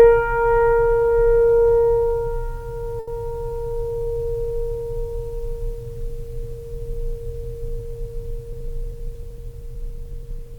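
Music, with two timing faults. From 2.99 to 3.09 s a sound hangs on too long, held for about 80 ms before the music picks up exactly where it left off. This is a short stall from a late packet: the jitter buffer ran dry, the receiver stretched the last sound until the packet arrived, and no music was lost, though playback now runs about 80 ms later. From 8.53 to 10.54 s the music pushes ahead at about 103% speed with unchanged pitch, so the tempo feels unsteady. This is a jitter buffer speed-up: with excess audio queued, the receiver trimmed brief pitch-period slices over and over, shaving off roughly 70 ms in total.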